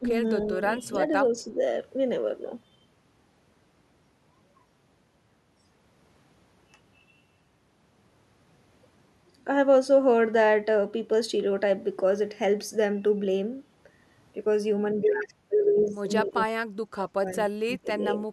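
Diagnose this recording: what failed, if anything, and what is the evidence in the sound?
The speech dips in patches at 0.0–0.22 s, 0.46–0.61 s and 0.93–1.58 s, only by a few dB. Near the end it drops much harder, roughly 20 dB or more, at 16.23–16.51 s, 16.95–16.99 s and 17.34–18.04 s. That points to call processing, likely speech suppressed in double talk: with both ends talking at once, the echo canceller couldn't tell the near talker from loudspeaker echo and turned both down.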